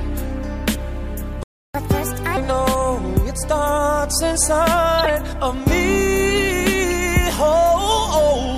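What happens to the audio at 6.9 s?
A brief chirp-like blip at 6.91 s: a corrupt frame decoded, where flipped bits in a single compressed frame made the decoder put energy at the wrong frequencies.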